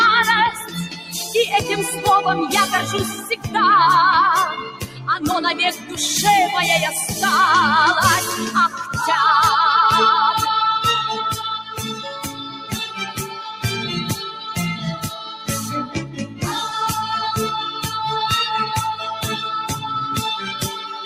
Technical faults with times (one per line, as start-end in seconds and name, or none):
0.00-21.06 noise suppressor applied to music or sounds
0.64-1.14 sound cut by the noise suppressor
4.71-5.07 sound cut by the noise suppressor
5.76-5.93 sound cut by the noise suppressor
11.58-13.64 sound cut by the noise suppressor
14.11-15.48 sound cut by the noise suppressor
18.94-19.25 sound cut by the noise suppressor
19.69-19.90 sound cut by the noise suppressor
20.36-21.06 sound cut by the noise suppressor